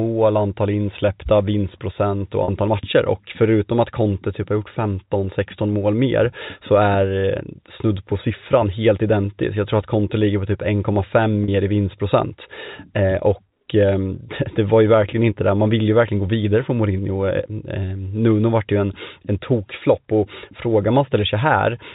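A speech clip carried over G.711 telephone coding, so nothing above 4 kHz comes through. It has two dropouts from packet loss with pitch repetition, at 2.44 s and 11.44 s. Each gap lasts about 40 ms, which fits two lost 20 ms packets. The receiver repeats the last pitch period to fill it, giving a brief held, buzzy tone.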